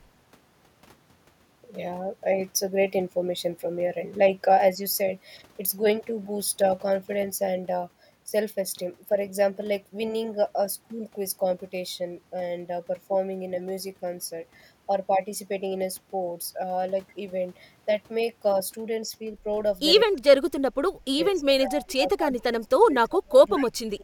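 Speech suppressed in double talk appears three times near the end: 20.05 to 20.61 s, 21.04 to 21.49 s, and from 21.66 s to the end of the clip. The talker's speech drops sharply, by roughly 25 dB in the first two and about 30 dB in the last, fading and cutting out in pieces over some 2.6 seconds in all. The likely cause is an echo canceller that, facing both sides speaking at once, couldn't tell this talker from loudspeaker echo and turned everything down.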